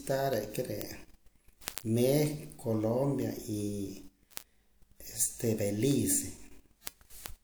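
From 0.14 s to 7.36 s, a steady train of sharp ticks of uneven strength runs underneath the speech, roughly ten per second and some seventy in all. These are word clock ticks. The receiving device is running on its own clock rather than locking to the sender's, and the two drift apart by something like 200 ppm. Each time they slip past one another, a single sample is dropped or repeated, and that tiny discontinuity is what clicks.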